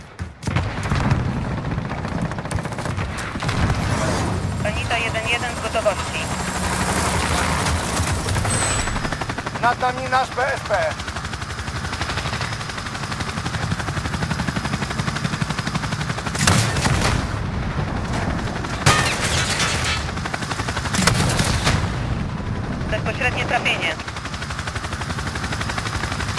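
Aliasing runs through the whole clip. The spectrum stops at 12 kHz, which fits a conversion down to a 24 kHz rate, and energy that lay above that edge has folded back into the band as unrelated, inharmonic tones about 20 dB below the main signal. High, hissy content sounds gritty and metallic. Plain band-limiting would only dull the top end. Here, false tones are added, and they track the high content in mirror image.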